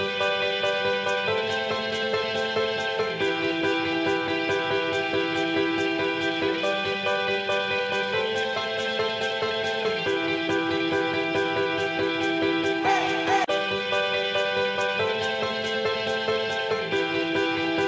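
Nothing stood out on listening; the audio carries the narrower top end of a wideband call path, with nothing above 8 kHz.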